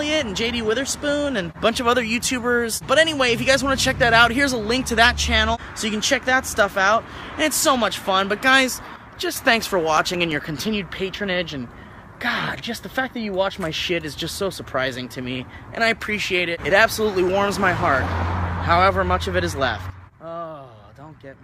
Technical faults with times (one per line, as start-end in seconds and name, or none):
8.96-9.36 sudden gain jump
9.63-11.17 CD scratch ticks
19.90-21.44 sudden gain jump